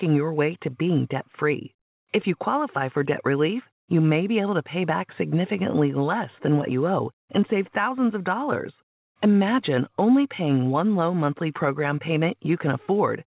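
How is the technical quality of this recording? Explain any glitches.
No glitches are audible: the sound comes through a call path with nothing above 4 kHz, consistent with 64 kbps G.711 mu-law, and the signal is never interrupted.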